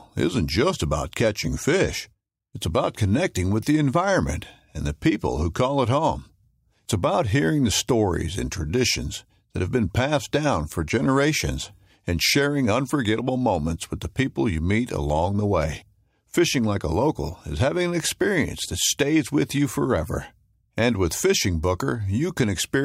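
No technical faults can be heard in the recording.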